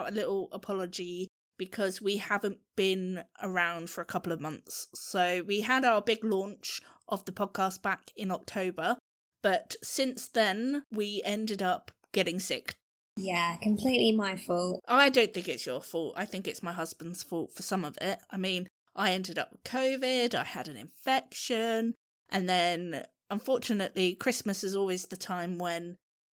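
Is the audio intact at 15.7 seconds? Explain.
Yes, at 15.7 seconds the speech runs intact, with no dropout, glitch or other fault at that moment.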